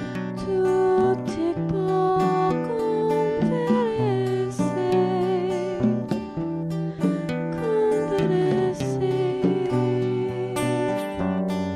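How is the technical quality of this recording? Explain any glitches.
There is one glitch: a single sharp click at about 1.01 s. It sounds like dropped samples, most likely a handful of samples, a tenth of a millisecond or so, missing from the stream. The waveform then jumps straight from one value to a later one, and that step is the click. The loss is far too brief to remove any audible sound, which separates it from a dropout, where a stretch of audio goes silent. It shows as one thin vertical line across the spectrum.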